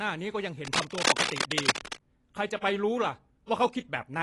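From the start and throughout, the speech is dull and smeared, with nothing above 11.5 kHz and a watery warble on sibilants, likely AAC compression at a low bitrate, near 32 kbps. Unlike plain low-pass filtering, the loss also smears detail below the cut-off.

From 0.65 to 1.98 s, dense, uneven scratching runs over the speech at roughly its own loudness, likely cable scratch noise from a worn contact being moved. Its rapid, irregular bursts set it apart from sparse, isolated clicks or crackle.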